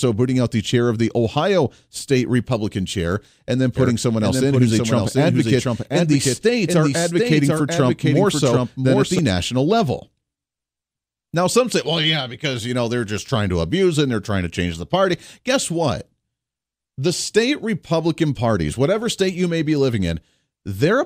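From 3.77 s to 9.19 s, just after "chair and then" and up to "national level", the speech carries a doubled audio track. A second full-band copy runs roughly 0.7 s behind the original, at around 5 dB lower, with no decay or room colouring. It switches in and out abruptly at both ends. The likely cause is a second, slower capture path or an edit leaving two misaligned copies mixed together.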